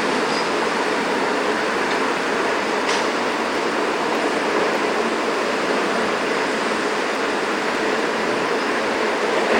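A regular tick or small pop cuts into these everyday sounds every 0.6 s, about fifteen times, from 0.55 s to 9.55 s. It is heard wherever the sound is present. The steady spacing points to clock drift buffer slips, likely from two devices running on separate clocks that disagree by around 300 ppm. The buffer between them drifts until a handful of samples is dropped or repeated, leaving a small discontinuity at each slip.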